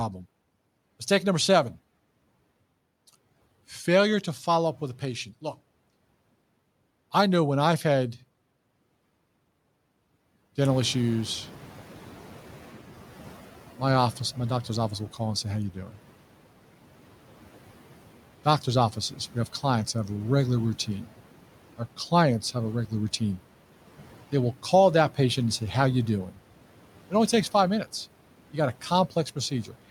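Throughout the speech, the background noise dips between phrases and swells back under them. These are noise suppressor artifacts: the suppressor cuts bands it judges to be steady noise, frame by frame, by about 12 dB, so the cut comes and goes with the speech.

Just after 10 s the room noise jumps up by about 16 dB, and from 10.61 s to 13.52 s it comes through louder before settling down ahead of "my office my doctor's". This is the noise suppressor catching up: its noise estimate lags the sudden rise, taking about 2.9 s to adapt before reducing the noise by about 9 dB.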